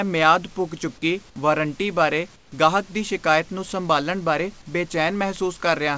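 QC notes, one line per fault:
2.36–2.52 s, comfort noise in place of the background: after "ਪੁੱਗ ਚੁੱਕੀ ਵਾਰੰਟੀ ਬਾਰੇ", the background goes flat, featureless and about 7 dB quieter. This is likely synthetic fill while transmission paused.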